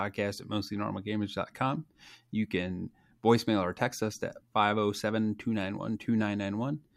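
Speech recording, with no technical fault to report. Nothing in it calls for a time stamp or a cause.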